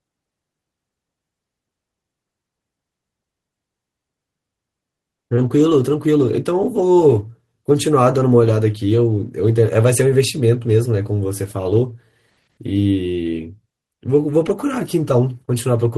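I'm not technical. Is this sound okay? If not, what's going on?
Yes, this recording sounds okay. Nothing in it stands out as a technical problem.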